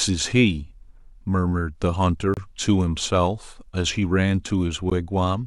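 At 2.34 to 2.37 s and again at 4.9 s, the speech drops to silence for 29 ms and 15 ms, then resumes: a Bluetooth stall, likely from interference delaying packets, showing as flat waveform gaps.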